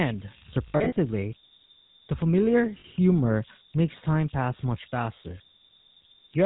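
Right through the clip there's a whistle riding under the speech, somewhere around 4 kHz and about 22 dB below the signal. That's converter idle tones: a delta-sigma converter with no dither settles into repeating bit patterns when the input gets small, and those patterns come out as a steady tone. You notice it most in the gaps, and under quieter passages it turns into a grainy hiss.

Also present throughout is the GSM full-rate codec, and its damage is plainly audible. The voice has that buzzy, gravelly edge you get when the coder rebuilds the vocal tract and drives it with a sparse, evenly spaced pulse train. Nothing comes through above 4 kHz, so the top end sounds cut off. The overall character fits the 13 kbps full-rate coder.

Then there are lost GSM frames, heard three times. The first and worst runs from 0.68 to 0.98 s. About 180 ms of audio is missing, scattered across roughly 280 ms, and the longest single gap is around 70 ms. 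That fits something like nine lost frames. The decoder patches each hole by repeating the settings of the last good frame, so instead of dropouts you hear a rough, metallic ring holding the sound in place. Two shorter hits of about 40 ms each follow, at 2.80 s just after "the familiar" and at 5.82 s just after "time pass much faster". Both are brief metallic smears.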